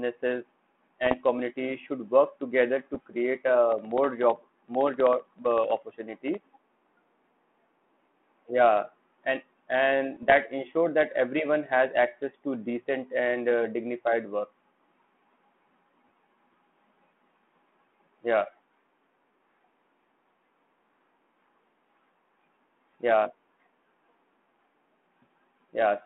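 At 1.05 to 1.21 s, 2.94 to 3.00 s and 10.14 to 10.32 s the speech breaks into pops and short rough bursts with brief jumps in level. These are bit errors on an ADPCM link. Each flipped bit throws off the decoder's step size and predictor, so the damage rings on for a few milliseconds instead of staying a single click. The bursts are irregular and cluster in short patches.

From 3.72 to 7.05 s a different fault appears: periodic USB or driver dropouts. About every 64 ms, roughly a millisecond of audio is replaced by silence, about fifty times in all. A blocked bus or driver causes the gaps. They sound as small, evenly spaced ticks that are heard only while there is signal. The strict regular timing and clean silent gaps set them apart from the uneven, smeared bursts of the ADPCM errors. Behind all of this, the telephone band stops at 3.4 kHz and carries the light grain of G.726 ADPCM, which points to a 32 kbit/s link.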